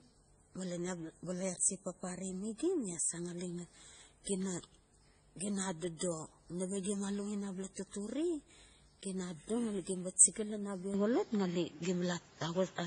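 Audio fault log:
throughout: transcoding between lossy codecs. The speech carries layered artefacts, those of two codecs heard together, with nothing above 9.9 kHz, likely from low-bitrate MP3 re-encoded as AAC-LC at 32 kbit/s. A spectrogram shows a hard ceiling and blotchy, patchy high-frequency blocks.
10.94–12.86 s: input switched to a poorer device. Right after "gim ba chiga lan" the sound turns duller with no gap. The band now stops at 7.6 kHz, the level shifts by roughly 5 dB and a new noise floor sits well below the speech, likely a change to a weaker microphone. On a spectrogram the ceiling drops abruptly and the quiet floor rises.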